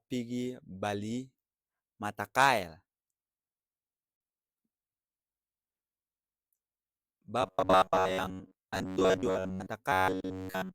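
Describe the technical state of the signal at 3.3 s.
At 3.3 s the speech signal is intact, with no technical fault present at that moment.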